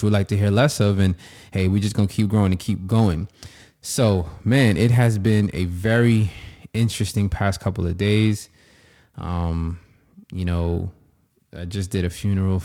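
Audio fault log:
Throughout: periodic clock jitter. The converter's sampling clock wobbles at around 1 kHz. Each component of the speech gains sidebands about 1 kHz above and below it. Higher frequencies suffer most. The result is a rough, metallic edge that disappears in pauses.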